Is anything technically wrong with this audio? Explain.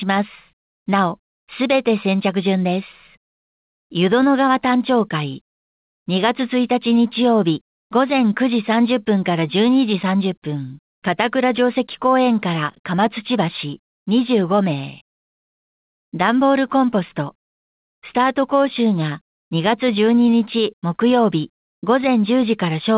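No, nothing is technically wrong with this audio. It has been through a call codec, most likely G.711 mu-law at 64 kbps, and the sound stops at 4 kHz with that codec's usual coding noise underneath.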